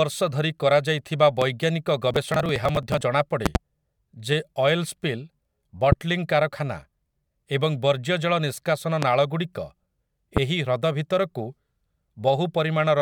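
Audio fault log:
1.42–1.44, 3.46–3.58, 5.92–5.95, 9.03–9.05 and 10.37–10.39 s, loud pop: a sudden voltage step, likely from a plug, switch, static or driver glitch, enters the signal path and lands as a sharp thump roughly 15 to 20 dB above the speech, doubled at 3.46 s. The first comes right after "ଧରି କରାଯାଇଥିବା", and the speech carries on underneath each one.
2.11–3.01 s, processor overload crackle: the processor keeps missing its deadlines for short audio buffers, in a pattern that fits roughly 10 ms blocks with several dozen dropped. Each dropped block is skipped outright, leaving a hard-edged gap, and the run of gaps tears gritty crackle through the speech until the load eases.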